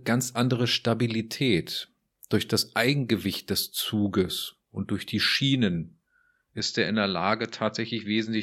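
At 6.6 s the recording likely switched its input to a poorer device, and the speech stays on that narrower path until the end. Nothing above 7.6 kHz gets through from there, so the top end is cut off and the voice turns duller and boxy. The change is abrupt, with no silence at the switch and about the same loudness. A faint new background noise appears, far below the speech.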